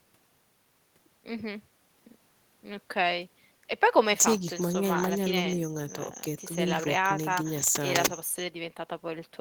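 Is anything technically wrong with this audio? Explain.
No, nothing technically wrong can be heard in this speech recording. There is no fault to point to anywhere in it.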